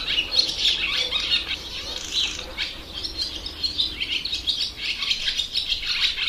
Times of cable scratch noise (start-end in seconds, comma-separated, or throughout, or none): none